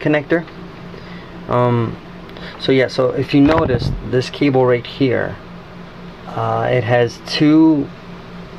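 The signal carries no audible technical faults at any point.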